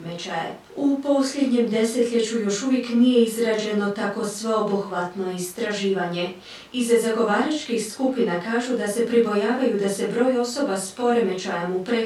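Nothing goes wrong anywhere in this speech recording, so there's no fault to walk through at any point along the way.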